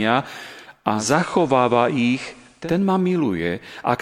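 A speech recording in which a digital radio blending to analogue episode runs from 0.87 s to 2.75 s. The receiver cross-fades over about 286 ms onto the FM version of the same station, and back at the end. While on FM, a hiss sits roughly 35 dB under the speech. The level does not shift across either blend.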